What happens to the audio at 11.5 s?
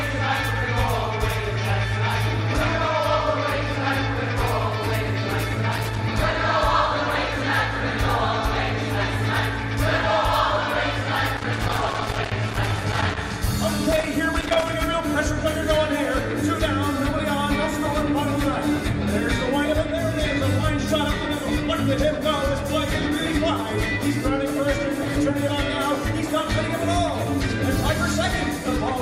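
A worn or dirty contact in the signal path is making and breaking as it shifts, a loose connector crackle that runs from about 11.37 s to 13.17 s, roughly 1.8 s. Each momentary break chops the signal, and any DC sitting on the line turns those interruptions into pops. At 11.5 s you are right inside that burst, so the sound breaks up into irregular crackling and scratching rather than carrying through cleanly.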